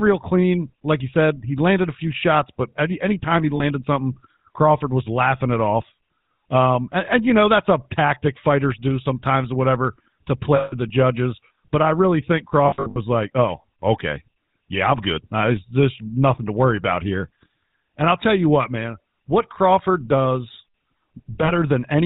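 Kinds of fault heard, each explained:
GSM full-rate codec: The speech passed through the original GSM full-rate coder, which fits a 13 kbps stream. It models the vocal tract and excites it with a sparse, regularly spaced pulse train that keeps only every third excitation sample, and it discards everything above 4 kHz. Throughout the clip this damage is plainly audible. The speech sounds dull at the top and carries a buzzy, gravelly roughness.
lost GSM frames: Some frames never arrived intact, so the decoder filled each gap by reusing the last good frame's settings. Short gaps of about 40 ms, at 3.56 s after "but any anytime he" and near 21.44 s, leave a brief metallic ring. At 10.56 s after "sometimes or whatever to", 160 ms is held as a rough ring. At 12.68 s, after "I really think", scattered losses over 280 ms ring.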